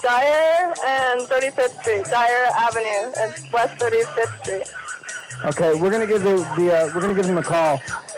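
Clock slip clicks run from 0.11 s to 8.11 s: faint, regular ticks roughly every 0.07 s, about a hundred in all. The likely cause is two free-running clocks differing by around 300 ppm, so a single sample is dropped or repeated each time the drift reaches one sample.

Chunks out of order appear at 7.07 to 7.10 s as a brief jumbled moment. A 10 ms piece of audio plays late, which fits a chunk displaced by two positions, leaving three hard joins where the sequence is wrong.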